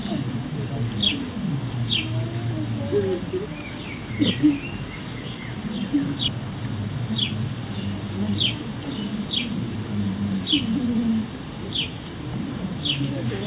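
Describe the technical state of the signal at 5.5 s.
At 5.5 s the signal is intact, carried cleanly through the call path with its usual narrowband telephone character, with nothing above about 4 kHz, which fits a G.711 A-law link at 64 kbps.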